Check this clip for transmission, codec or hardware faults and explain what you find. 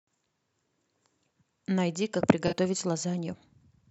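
One codec fault is present: a corrupt frame concealed between 2.47 and 2.54 s. Damaged AAC data was detected and the decoder papered over it, covering a span about 70 ms long, which fits roughly three frames.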